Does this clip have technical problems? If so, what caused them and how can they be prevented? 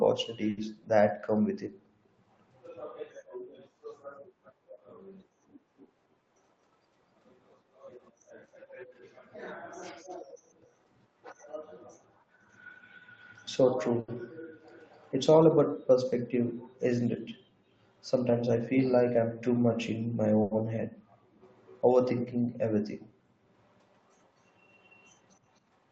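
Yes. There are short stalls from late packets at 0.49 to 0.60 s, 14.00 to 14.11 s and 20.42 to 20.54 s. Each time, a packet arrived late and the jitter buffer ran empty. The receiver held the last sound for 80, 80 and 90 ms, so a syllable drags briefly. Nothing is lost. A somewhat deeper jitter buffer, or steadier network timing, would prevent this.

Jitter buffer speed-up occurs at 6.35 to 6.86 s and 18.29 to 19.30 s. The buffer held more audio than it aims for. The receiver trimmed pitch-period pieces, about 70 ms in total each time. The speech runs at 115% and then 107% speed, with unchanged pitch. It sounds hurried. Steadier packet delivery avoids the backlog that triggers this.

Echo leak appears as faint, delayed copies of the speech. They come 255 ms late and sit roughly 30 to 40 dB below the speech. You hear them at 7.78 to 8.11 s, 14.68 to 15.26 s, 18.07 to 18.11 s, 21.44 to 21.82 s, 23.91 to 24.28 s and 24.72 to 25.59 s. 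The likely cause is a loudspeaker on the far side whose echo canceller left residue. Headphones, or better echo cancellation, would prevent it.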